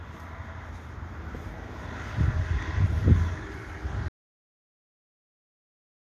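A recording of sounds with an audio dropout to silence from 4.08 s to the end, about 2.1 s. The sound cuts abruptly to silence with no room tone left, unlike a fade or noise gate, most likely from a lost input.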